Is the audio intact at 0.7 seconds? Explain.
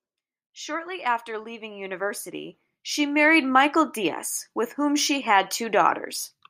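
Yes, at 0.7 seconds the speech plays through intact, with no dropout, click, distortion or other fault audible at that point.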